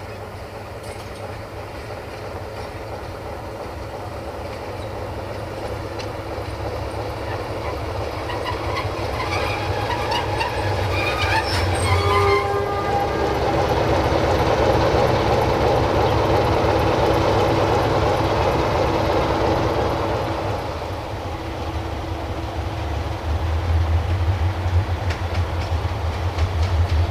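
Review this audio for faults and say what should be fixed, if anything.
A steady buzz at 75 Hz, with a gritty hash riding above it, sits under the sound for the whole clip, roughly 25 dB below the programme level. This is video or display buzz: a monitor or video cable running at a 75 Hz refresh is coupling its field-rate switching into the audio path, either through shared grounds or by induction into nearby unbalanced wiring. It needs fixing. Prevent it by routing audio cables away from display and video leads, using balanced connections, and giving the display and audio gear a common ground.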